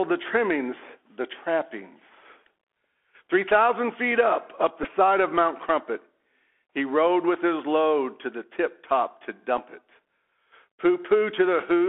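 Throughout, the speech passes through a Bluetooth CVSD headset codec. The spectrogram is empty above 4 kHz, while granular hiss and scratchy s sounds appear as fuzzy, ragged waveform edges.

At 4.83 s and 9.57 s, a Bluetooth headset packet was repeated. About 11 ms, then 7.5 ms, of lost audio is refilled by replaying earlier packets, producing a brief steady buzz near 267 Hz each time.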